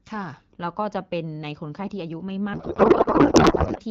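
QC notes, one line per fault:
2.53–3.80 s: codec payload misread. The speech gives way to garbled noise and warble that barely follows it. The decoder pulls fields from the wrong bit positions, which fits octet-aligned AMR-WB frames being unpacked as bandwidth-efficient. Both sides then share one format again.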